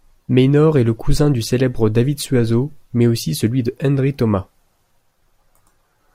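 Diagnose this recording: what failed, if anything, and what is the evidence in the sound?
Nothing stood out on listening to this speech recording that would point to a failure at any stage of the chain.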